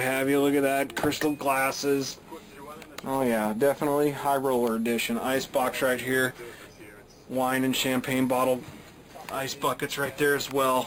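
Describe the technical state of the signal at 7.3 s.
At 7.3 s, as through the whole clip, there is imaging from sample-and-hold upsampling. The sound appears to have been raised from about an 11 kHz rate by repeating samples without smoothing, leaving a metallic fizz mirrored between 5.5 and 11 kHz, about 16 dB below the signal.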